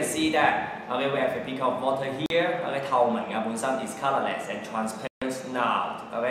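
At 2.26 to 2.30 s and 5.07 to 5.22 s, silent gaps of 41 and 142 ms cut the sound, likely Bluetooth dropouts from late packets. Each appears as a blank vertical band, a flat waveform, before the sound resumes further along.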